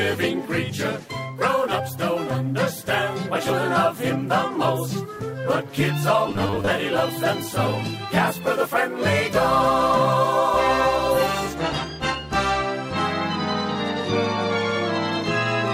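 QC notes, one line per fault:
6.29–6.71 s, robotic sound from repeated short buffers: for just under half a second the sound turns into a stiff, metallic buzz pitched at about 100 Hz, still loosely tracking the material underneath. That fixed pitch is the giveaway. It's likely that fresh audio wasn't arriving fast enough, so playback kept looping the last 10 ms chunk to fill the gaps, with a fair share of the real audio skipped in that stretch.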